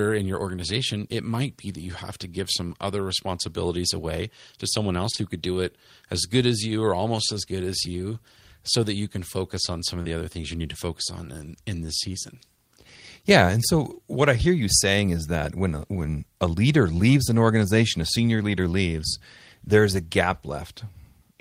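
At 5.11 s and again straight after at 5.15 s, then once more at 10.02 s, there is short concealed packet loss. Each time about 20 ms of the speech failed to reach the decoder in time. The receiver patched each gap by extending the preceding sound, then faded back into the real signal. The back-to-back pair near 5.1 to 5.2 s sounds like a brief smeared wobble. The single gap at 10.02 s is a quick smear.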